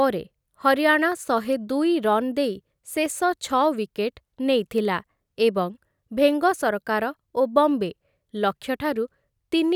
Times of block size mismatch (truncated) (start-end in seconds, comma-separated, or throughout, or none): none